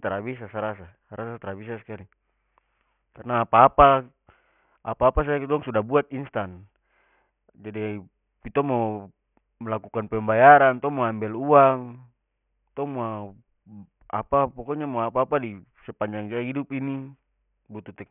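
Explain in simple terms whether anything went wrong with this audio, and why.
All the way through, the speech has a gritty, metallic edge, and the s and sh sounds come out harsh and oddly pitched. That is aliasing: the audio was converted to a lower sample rate, likely 6 kHz, without first removing high frequencies, so everything above 3 kHz folded back down as false tones.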